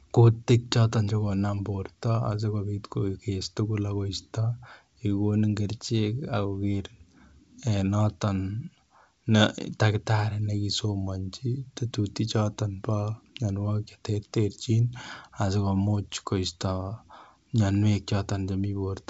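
There are no technical faults to describe in this speech, which comes through G.722 wideband telephone coding at 64 kbit/s.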